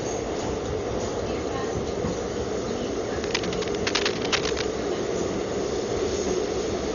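A recording of everyday sounds that's dull the whole way through, with nothing above about 6.9 kHz and a rough, fluttering noise around tonal bits, likely Dolby Digital compression at a low rate, something like 40 kbps. From 3.24 to 4.65 s there's a burst of uneven scratching and rustling sitting only a little below the sound itself, which is likely cable scratch noise from a worn lead or connector being moved.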